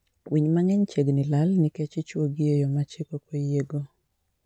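No technical faults can be heard anywhere in this recording.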